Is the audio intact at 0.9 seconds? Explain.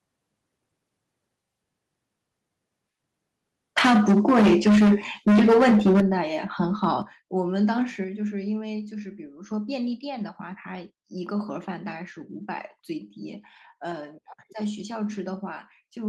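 Yes, at 0.9 seconds the speech plays through cleanly, with no audible dropout, click, distortion or other fault at that moment.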